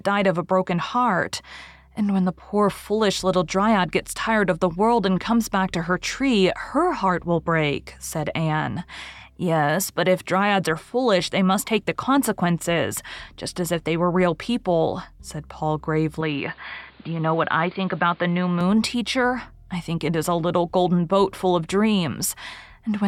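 From 16.21 to 18.61 s, starting at "teacher I think it", the speech turns dull and narrow, losing everything above 4.9 kHz, with faint added noise. This is likely an input switched to a poorer device.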